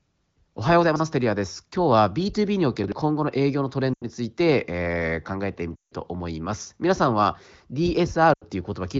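At 0.84 s and again at 2.84 s the audio chunks were out of order: a 40 ms chunk was delivered or written late and slotted in after material that should have followed it. In the first case it landed three chunks behind its place, jumbling 0.84 to 1.0 s. In the second it was one chunk late, around 2.84 to 2.92 s. Nothing drops out, but each reordering creates three abrupt joins, heard as a brief scrambled stutter.

Later, lost AMR speech frames appear. Transmission errors corrupted frames, and the decoder filled the gaps by repeating its last good pitch and spectral settings while fading the gain. At 3.94 to 4.04 s and 8.33 to 8.44 s, gaps of about 80 ms (consistent with four 20 ms frames) produce a short drop to near silence. At 5.76 to 5.93 s, a 160 ms gap stretches further and fades toward silence before the sound returns weak or rough. Throughout, the AMR-WB wideband coding keeps its clear HD Voice band.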